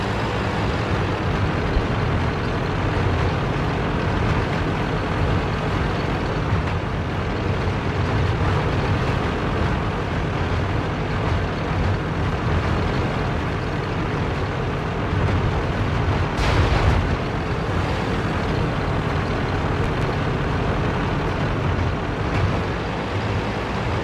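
At 19.84 s two sharp pops land in quick succession, the pair over by 20.05 s, standing out roughly 10 dB above the surrounding sound, which continues uninterrupted beneath them. This is a loud pop. The likely cause is a sudden voltage step or pulse entering the signal chain, from a connector being touched, a switch, a static discharge or a driver glitch, with the following circuitry shaping each pulse into a brief, hard transient.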